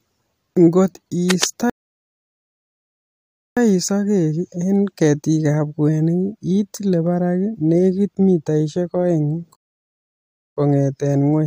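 From 1.30 to 1.46 s, cable scratch noise rustles over the speech, only a little quieter than it, likely from a worn connector moved during recording. On a spectrogram it shows as ragged broadband smears. Rebuffering stalls follow at 1.70–3.57 s, adding 1.87 s of silence, and at 9.56–10.57 s after "barak netik mitaishek oeng", adding 1.01 s. Each time the player ran dry and resumed exactly where it stopped, leaving flat waveform gaps with nothing missing.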